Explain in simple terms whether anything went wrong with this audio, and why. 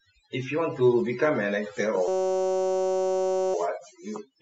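A system hang loop runs from 2.08 to 3.54 s. The computer stalled, and the sound hardware replayed one 5.33 ms slice, which fits a 256-sample buffer, giving a steady buzz at 188 Hz.

Overdone noise removal affects the whole clip. Noise reduction set too strong switched off quiet parts of the voice along with the background noise, leaving near-silence with twinkling specks.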